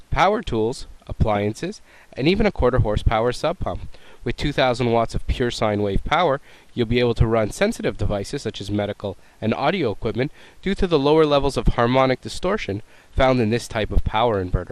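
From start to finish the sound is dull and carries a gurgling, granular edge, with upper bands flickering in and out. This points to a low bitrate around 80 kbps, likely MP2 compression starving its sub-bands of bits, switching the highest off and coarsely quantising the rest.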